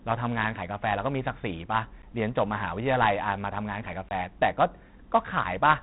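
4-bit ADPCM compression runs through the whole speech clip. Each sample is coded as a coarse step from a prediction, so a gritty hiss rides on every loud syllable and sharp onsets distort. Nothing remains above 3.9 kHz, dulling the sound, which fits a 32 kbps stream.

A block of digital silence falls at 2.02 s, about 12 ms long, and a second from 4.09 to 4.11 s, about 23 ms. The output buffer likely went unfilled, consistent with 512- and 1024-sample blocks, so the audio cuts out abruptly and back with no fade.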